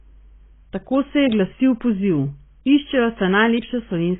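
AAC compression damage runs through the whole speech clip. Nothing is heard above 3.7 kHz, and the sibilants and sustained sounds carry a smeared, warbling texture. This is likely heavy AAC-LC coding at a very low bitrate, around 16 kbps, which discards upper bands and coarsely quantises the rest.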